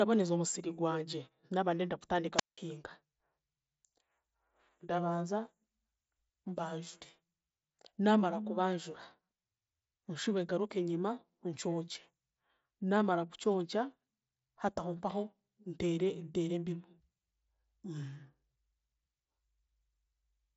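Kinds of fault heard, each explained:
Wireless microphone squelch dropout: just after "omusiri gwangye naaba ndenda", around 2.36 s, the radio link from an analogue FM mic fades and hiss swells for a moment. The receiver's squelch then clamps the output shut, leaving a near-silent hole of about 181 ms before the signal returns by 2.59 s. Everything here passes through a headset path that stops near 7.7 kHz, so that static burst has nothing above that.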